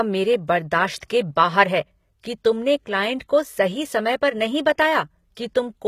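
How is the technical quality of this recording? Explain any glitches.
The recording has plainly audible codec damage throughout and one distinct transient fault.

Throughout, the treble has the synthetic, gritty quality of HE-AAC compression, which is the likely cause. The upper band sounds rebuilt: the codec keeps the lower spectrum and fills the top by copying lower bands upward under a coarse envelope, so harmonics don't align above the crossover. Sibilants come out metallic and lispy. The damage fits a low bitrate around 20 kbps, and nothing is present above 14.9 kHz.

From 0.98 to 1.02 s, just before "के बाहर है कि", there is a pre-echo spread over about 44 ms. The codec distributes quantisation noise across its whole transform block, so noise scaled for the loud attack also fills the quieter stretch before it. The result is a brief hiss leading into the onset, which itself sounds softened and smeared rather than crisp.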